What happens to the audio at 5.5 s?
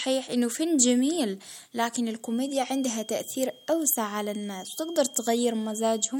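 A feedback whistle is sounding at 5.5 s, part of a steady tone that runs from 2.17 s to the end. A thin 3.2 kHz whistle sits roughly 25 dB below the speech, swelling and fading slowly in level. The likely cause is a loudspeaker-to-microphone loop held right at the edge of feedback.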